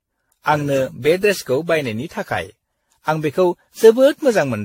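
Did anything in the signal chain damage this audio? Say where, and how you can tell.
Yes, at the codec stage: the speech shows generation loss from start to finish, likely from being run through a lossy encoder around ten times over, with a character that fits AAC-LC at about 64 kbit/s. Each re-encode requantised the signal on a shifted frame grid, so noise and spectral gaps compounded. The result sounds swirly and hollow, consonant onsets are smeared, and nothing remains above 16.6 kHz.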